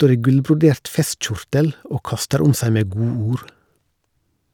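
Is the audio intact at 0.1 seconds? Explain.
Yes, the speech at 0.1 s is intact, with no fault at that moment.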